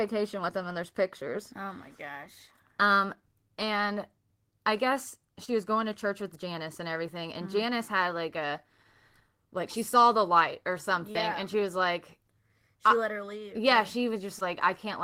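Short concealed packet loss occurs at 5.45–5.50 s, between "and I guess" and "was going to church", at 11.12–11.17 s after "the light or something", and at 14.39–14.43 s. Each time, 20 to 40 ms of speech arrived too late to decode. The receiver stretched the preceding sound across the gap and blended back, leaving a brief smear or wobble.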